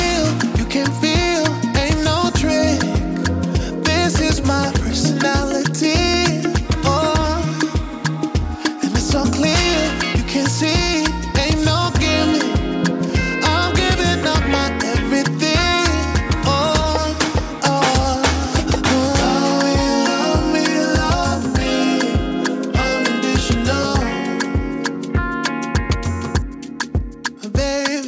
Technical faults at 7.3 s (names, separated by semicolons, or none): none